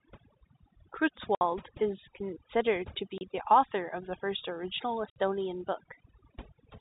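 Throughout the clip, overdone noise removal is audible: the suppressor was set so aggressively that bands near its noise estimate are pulled to nothing, leaving a near-silent background with twinkling specks.

Packet loss filled with silence cuts three clean gaps: 1.35 to 1.41 s, just before "is considered to"; 3.18 to 3.21 s, between "is considered to" and "the author of the"; and 5.10 to 5.16 s, right after "of the first original". The 60, 30 and 60 ms holes point to 30 ms packets, and each gap has hard edges.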